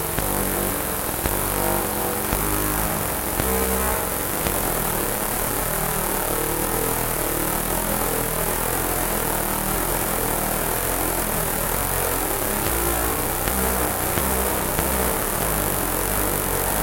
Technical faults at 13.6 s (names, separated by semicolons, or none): none